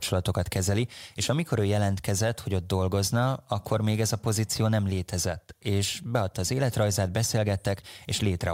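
No technical faults can be heard anywhere in the recording.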